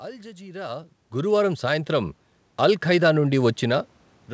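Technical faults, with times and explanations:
1.11 s to the end, automatic gain rising: the gain control judged the input too quiet and kept raising its level, so speech and room noise swell together.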